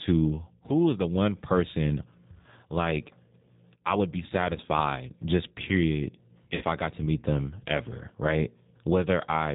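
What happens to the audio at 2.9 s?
At 2.9 s you're hearing the G.729 codec damage that runs the whole clip. Speech is rebuilt from a vocal-tract filter, pitch predictor and a few pulses per frame, nothing above 4 kHz, so it sounds rough and synthetic, which fits 8 kbit/s G.729A.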